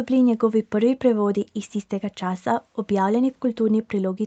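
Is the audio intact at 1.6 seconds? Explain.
Yes, the speech at 1.6 seconds is intact, with no dropout, glitch or distortion at that moment.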